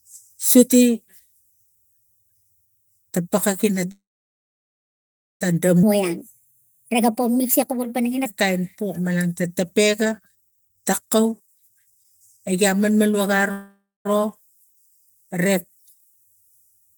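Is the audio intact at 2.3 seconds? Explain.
Yes, the audio is intact at 2.3 seconds, with no fault audible at that moment.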